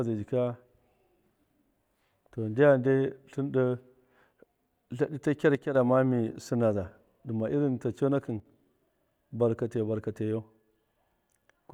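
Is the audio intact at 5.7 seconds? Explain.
No. From 5.55 to 5.75 s the speech drops abruptly by about 6 dB and comes straight back, which is a one channel drops out fault. The likely cause is one stereo channel going silent for those 0.2 s. Once the two channels are summed to mono, the shared part of the signal loses half its contribution. Unlike a gain dip or fade, the level steps rather than ramps, and the sound keeps its tone and timing.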